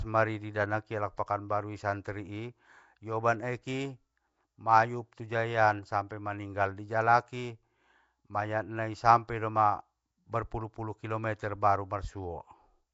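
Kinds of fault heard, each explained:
Nellymoser compression: The speech sounds rough, hissy and smeared throughout, with nothing above 7.7 kHz, likely from Flash's Nellymoser Asao codec at a low bitrate.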